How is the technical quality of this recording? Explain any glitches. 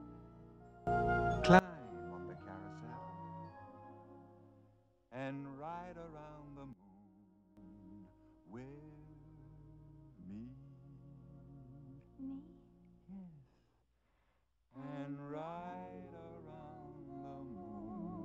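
The recording has two sudden gain jumps. From 0.87 to 1.59 s, the level leaps up by about 22 dB. From 6.73 to 7.57 s, it drops by about 12 dB. The sound and the background noise move together. The likely cause is a gain change applied without a ramp.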